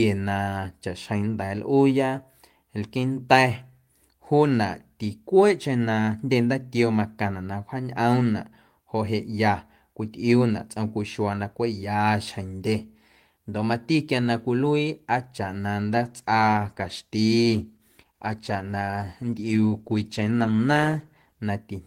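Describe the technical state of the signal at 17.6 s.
At 17.6 s the speech sits inside a call bitrate drop running from 15.9 to 21.49 s. The encoder, starved of bandwidth, codes coarsely and trims the highs, a sound that fits a fall from 32 to 15 kbps. It comes across as muffled and watery, and a spectrogram shows the upper band missing with smeared detail.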